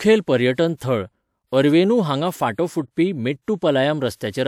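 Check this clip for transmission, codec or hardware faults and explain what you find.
One codec fault is present in this speech clip: pre-echo from about 0.75 to 0.80 s, just before "थळ अरवेनू हांगा". The transform codec spreads quantisation noise across its block, so roughly 57 ms of hiss precedes the attack, which sounds softened and smeared.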